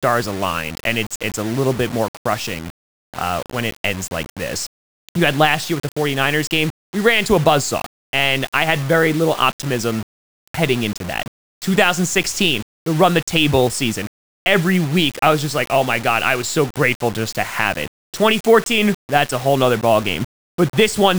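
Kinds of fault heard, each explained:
low bit depth without dither: The speech was likely reduced to about five bits by plain rounding with no dither, so the error follows the signal. Throughout, it sounds grainy and gritty, with distortion only about 20 dB below the speech, and quiet tails drop to silence or sputter.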